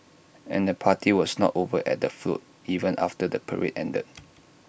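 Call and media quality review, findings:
No technical faults detected in the signal path for this speech recording; no dropouts, level excursions or timing discontinuities appear anywhere in it.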